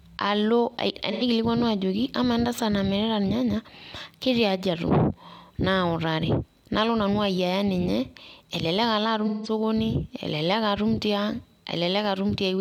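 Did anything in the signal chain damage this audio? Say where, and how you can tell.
Yes, the damage is at the codec stage, where AAC frame loss with concealment shows up twice in this speech. From 1.11 to 1.23 s, just before "ajoki amaa entasat", there's a smeared, phasey patch of about 85 ms, which fits two lost frames. A longer one sits at 9.27 to 9.50 s, about 171 ms, consistent with four frames. The decoder rebuilt each gap from the last good spectrum with scrambled or interpolated detail, which is why those stretches sound blurred and noisy.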